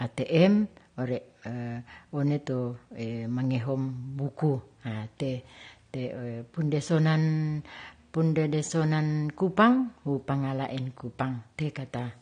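From start to finish the audio sounds dull and smeared, with a warbling, fizzy edge on sibilants and sustained sounds, and nothing at all above about 9.7 kHz. This is likely AAC compression at a low bitrate, consistent with roughly 32 kbps AAC-LC. To fit that budget, the encoder coarsely quantises each frame's frequency lines, lowers its cut-off and leaves gaps in the spectrum, which produces the muffled top end and the unstable, swirling texture.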